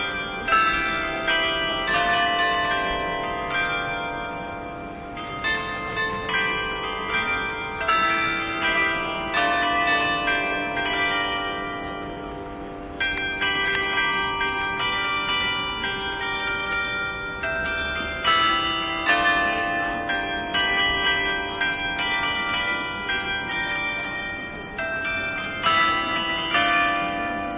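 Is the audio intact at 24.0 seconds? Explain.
Yes, the audio at 24.0 s is intact, with no fault heard at that moment.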